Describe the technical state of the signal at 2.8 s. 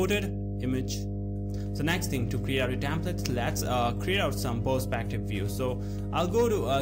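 At 2.8 s the signal carries mains hum, and it runs through the whole clip rather than starting or stopping there. The hum sits at 50 Hz, with some low harmonics above it. It is roughly as loud as the wanted sound itself, so it competes directly with it. A ground loop or a nearby transformer is letting the power line leak into the audio path. The result is a steady low drone under everything.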